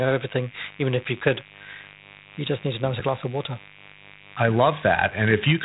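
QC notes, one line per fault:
Throughout, mains buzz: a steady, raspy buzz sits under the speech at about 25 dB down, and never lets up between phrases. Its rough edge comes from sharp switching spikes locked to the 50 Hz supply, arriving twice per cycle, so the hum carries a long ladder of harmonics of 50 Hz climbing well into the kilohertz range rather than a pure low tone.
Throughout, Dialogic VOX ADPCM: the speech sounds narrow and phone-like, with nothing above 3.8 kHz, and a gritty hiss rides along with it, rising and falling with the voice. This is the 4-bit adaptive coding used for telephone menus and voicemail, at a rate that fits 32 kbps. Each sample is squeezed into a coarse step, and that clearly audible quantising grit follows the signal's level.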